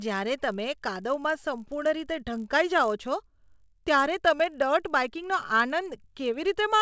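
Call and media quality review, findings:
50 Hz buzz throughout, present only under speech. Resampler restarted on every block, so each 20 ms block edge errs. Fits a 48 kHz to 16 kHz conversion.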